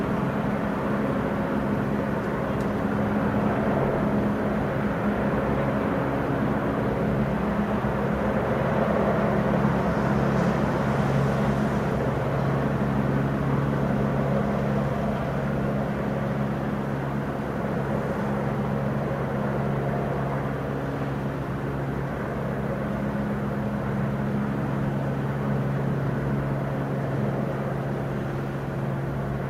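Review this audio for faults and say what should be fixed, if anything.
Nothing stood out on listening to these sounds, so there is nothing here that needs fixing.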